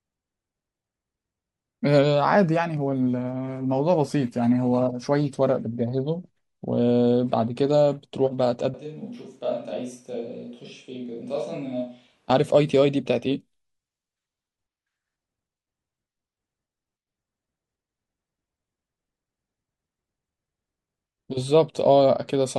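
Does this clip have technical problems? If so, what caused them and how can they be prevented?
Yes. A switch to a distant microphone occurs from 8.74 to 12.30 s. The speech suddenly turns roomy and hollow, loses bass, drops by around 10 dB, and gains background noise sitting roughly 35 dB below the speech. It then snaps back just as abruptly. The likely cause is that the close microphone's signal dropped out or was left out of the mix for that stretch, so a farther pickup such as a camera microphone filled in. To prevent this, monitor the close microphone on headphones throughout, secure its cable or wireless link, and record a backup track.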